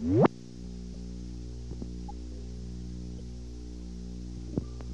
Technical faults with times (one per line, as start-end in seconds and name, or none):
0.93-0.96 broken MP3 bit reservoir
2.08-2.11 broken MP3 bit reservoir
3.18-3.21 broken MP3 bit reservoir